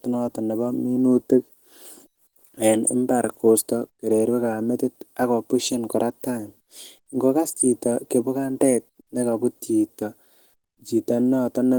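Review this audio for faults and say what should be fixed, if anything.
Opus compression runs through the whole clip: the speech sounds hoarse and muffled, with grainy, noise-filled texture rather than MP3-style swirling, since bands are filled instead of left empty. The hoarseness likely points to the hybrid speech mode at a low rate, fitting about 16 kbps, even though content still reaches about 20.1 kHz. Encode at a higher Opus bitrate, or keep an uncompressed master, to prevent it.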